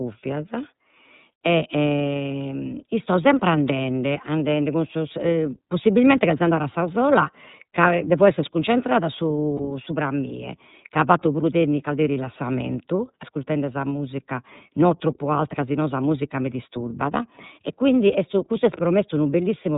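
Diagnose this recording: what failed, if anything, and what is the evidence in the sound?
The speech has passed through the iLBC codec at the coding stage, with 30 ms frames, which fits its 13.33 kbps mode. Nothing above 4 kHz survives, so the audio is narrowband, and the excitation coding leaves it plainly rough and slightly synthetic.

Lost iLBC frames at the network stage: a single 30 ms frame went missing at 9.57 to 9.60 s. The decoder filled the gap by repeating the last pitch cycle blended with noise, so that moment sounds like a brief held, buzzy vowel before normal sound resumes immediately.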